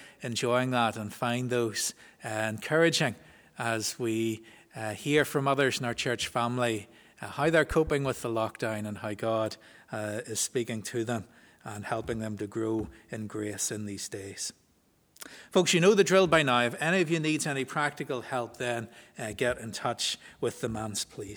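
At 7.71 s a voltage spike, likely static or a switch, enters the signal, giving a loud pop: two thumps by 7.91 s, riding above the sound.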